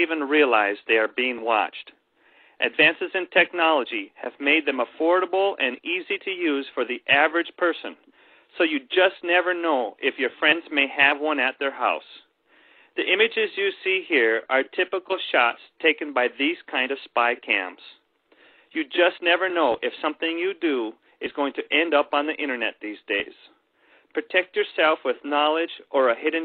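No technical faults can be heard in this recording.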